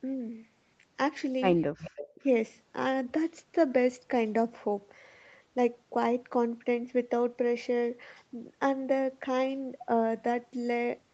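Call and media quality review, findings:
Echo leak, 1.61–2.24 s: faint delayed copy trailing the talker by about 212 ms, around 15 dB down. On the spectrogram, a ghosted repeat of the harmonics; likely incomplete far-end echo cancellation.

Speech suppressed in double talk, 2.14–2.20 s: brief level dip of roughly 20 dB, visible as a notch in the waveform envelope. Likely the echo canceller ducking near-end speech while echo overlapped.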